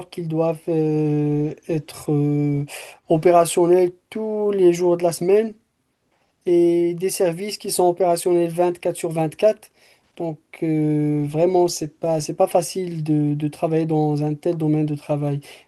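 No technical faults can be heard anywhere in the recording.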